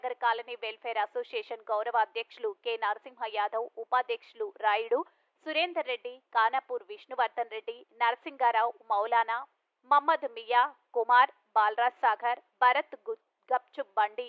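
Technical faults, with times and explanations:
Nothing stood out as a technical fault on listening.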